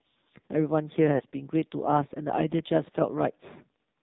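Throughout, the speech carries the sound of the AMR narrowband mobile codec. The audio is band-limited at 4 kHz, so nothing above that survives. The codec models the vocal tract and excites it with a few pulses per subframe. At this level of damage the voice turns buzzy and synthetic. The heavy coding fits one of the lowest modes, around 5.9 kbps.

From 1.16 to 1.23 s there is a brief break from lost AMR speech frames. That gap fits two dropped 20 ms frames. The decoder had no valid data for that stretch. It filled in by repeating its last good pitch and vocal tract settings while lowering the gain. The result is a short, smeared dip with a warbling quality before normal decoding resumes.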